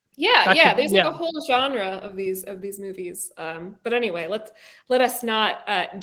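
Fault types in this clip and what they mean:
No faults found; the speech carries only light Opus voice-compression colouring, with the full audio band kept.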